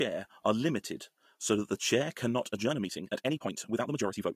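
A short speech recording that runs at a natural pace until 2.5 s, then abruptly rushes for the rest of the clip through to the end at about 4.36 s. That last stretch is a time-stretched section, sped up by about 1.61 times with the pitch held where it was, so it comes across hurried rather than squeaky. It's likely software squeezing that part to fit a set length by dropping short slices of the audio.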